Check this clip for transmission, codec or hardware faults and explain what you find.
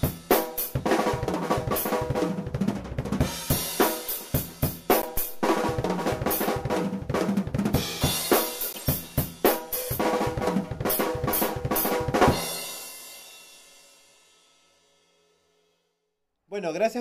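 Two faults stand out, both corrupt frames decoded. The first runs from 5.02 to 5.07 s. The second runs from 8.72 to 8.88 s. Bits inside compressed frames were flipped, and the decoder played them anyway. Misread gains and codes put energy at the wrong frequencies. The first hit spans a few frames and peaks near -15 dBFS. It is a short chirp, squeak, blip or burst of noise. The second covers several frames and is quieter, near -20 dBFS. It is a longer chirp, squeak, blip or burst of noise.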